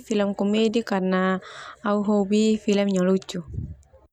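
No technical fault can be heard anywhere in this speech recording, and the signal holds steady throughout.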